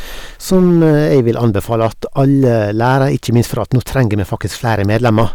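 Across the whole clip the speech runs into hard clipping. The signal was driven about 7 dB beyond what some stage in the chain could pass, so every peak that exceeds the limit is sliced flat instead of being reproduced. Only around two percent of the waveform reaches that ceiling, but each flattened top adds harmonics high in the spectrum, heard as a gritty crackle riding on the louder syllables wherever the level peaks.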